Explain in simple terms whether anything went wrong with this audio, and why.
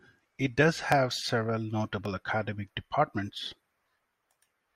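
Two jumps in the speech, at 0.92 s just after "it does" and at 2.05 s just before "academic departments". This is likely a dropped buffer (overrun): the recording fell behind, so a few milliseconds of sound were lost and the two sides were joined directly.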